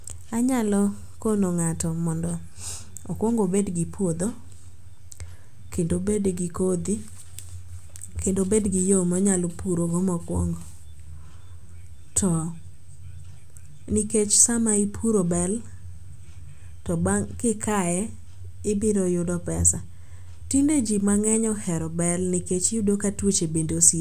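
The speech recording contains no technical faults to describe.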